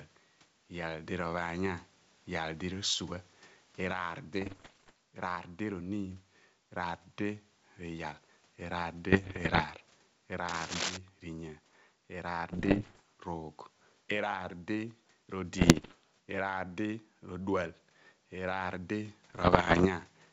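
Throughout the speech there is gain pumping: the level ducks by about 10 dB under each loud syllable, most likely a fast limiter working against far too much mic gain. On a waveform the envelope looks flattened.

From 4.41 to 4.91 s, bit errors on an ADPCM link cause pops and rough bursts. Flipped bits throw the decoder's step size and predictor off, so each error rings on briefly. A spectrogram shows broadband vertical streaks with short level jumps. The same damage, at an error rate of roughly one percent or a little more, returns at 9.12 to 9.63 s.

From 10.48 to 10.98 s there is cable scratch noise: dense, uneven rustling about as loud as the speech, likely from a worn connector or cable being moved. It appears as ragged, irregular broadband texture across the spectrogram.

The bit errors on the ADPCM link recur at 12.52 to 13.00 s, 15.58 to 15.94 s and 19.30 to 19.87 s, each with the same pops, brief level lurches and streaked spectral bursts.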